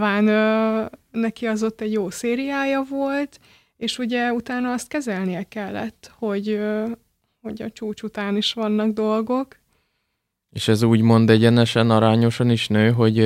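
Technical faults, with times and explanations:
No technical faults heard.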